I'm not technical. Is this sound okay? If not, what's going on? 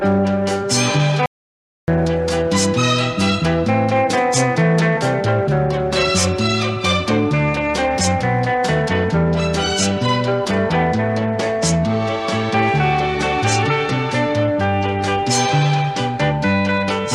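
No. At 1.26 seconds the sound suddenly cuts out and stays completely silent until 1.88 seconds, a gap of about 0.6 seconds with not even faint background hiss, then picks up again mid-flow. This is an audio dropout to silence. The recording likely lost its input for that moment, perhaps a loose connection or a brief mute, and simply recorded nothing. Whatever happened during that gap is missing and can't be recovered.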